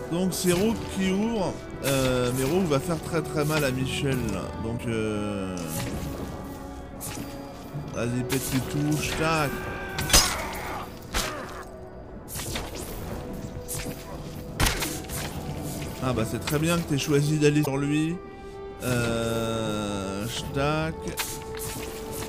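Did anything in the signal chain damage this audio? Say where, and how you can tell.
Yes: damaged data in a compressed stream, 4.74–4.80 s and 17.62–17.68 s. Corrupt codec frames break decoder sync, giving brief blips until it finds the next frame.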